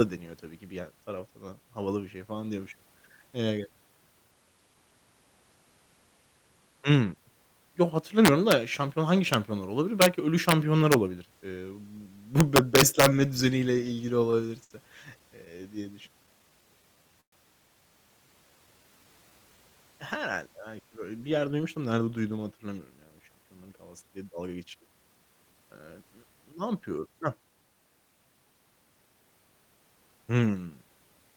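Integer overflow produces sharp cracks at 8.25–8.52 s, just before "şampiyon hangi", then at 9.34 s right after it, at 10.02–10.06 s, 10.49–10.52 s, 10.92–10.94 s, and 12.41–13.06 s. Peaks about 1 to 5 dB over the limit wrap to the opposite sign, which shows as large vertical jumps in the waveform and broadband streaks on a spectrogram.

Repeated stalls (stutter) run from 13.87 to 16.42 s. Eighteen short waits, the longest 61 ms, were filled with continued sound totalling 220 ms. Nothing is lost, but the audio drags, with smeared, repeated slices in the spectrogram.

A jitter buffer slow-down overlaps this from 15.75 to 17.09 s. Repeated pitch periods add 130 ms, so playback runs at 91% speed without changing pitch, and harmonics appear stretched horizontally.

A call audio freeze at 17.21–17.34 s fills 117 ms with fading continuation that ends in about 100 ms of silence, likely from packets held up in transit. 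The waveform shows a decaying tail and then a flat gap.

A second slow-down at 18.27–19.76 s adds 171 ms and plays at 89% speed, producing drawn-out sounds with elongated spectral features.

A jitter buffer speed-up follows "belki böyle bir" from 21.45 to 24.89 s. Around 0.4 s of pitch periods is trimmed, giving 112% speed at the same pitch, and the spectrogram's features look compressed in time.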